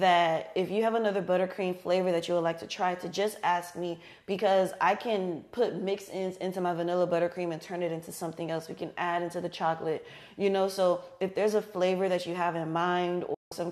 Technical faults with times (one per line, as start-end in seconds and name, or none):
13.34-13.52 digital broadcast dropout